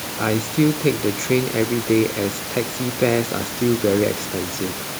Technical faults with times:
none

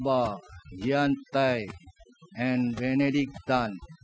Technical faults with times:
0.00-4.03 overdone noise removal

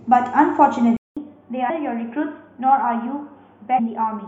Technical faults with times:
0.97-4.27 input switched to a poorer device
1.69 compressed frames skipped
3.78 compressed frames skipped

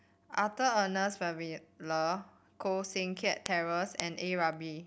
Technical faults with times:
0.26-4.80 word clock ticks

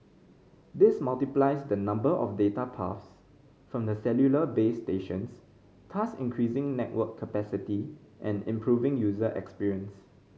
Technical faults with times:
none

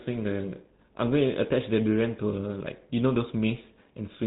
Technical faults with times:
0.00-4.26 GSM full-rate codec

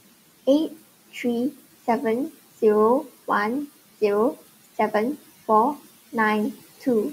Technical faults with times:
1.51-1.74 speech cut by the noise suppressor

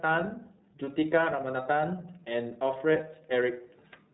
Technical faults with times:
0.00-4.13 iLBC codec

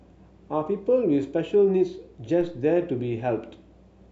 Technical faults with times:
2.41 DC step

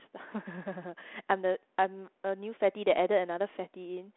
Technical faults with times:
none

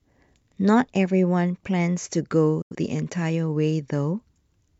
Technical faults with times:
2.62-2.75 digital broadcast dropout

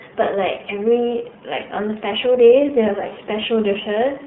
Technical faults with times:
0.00-4.27 iLBC codec
3.08-3.13 lost iLBC frames

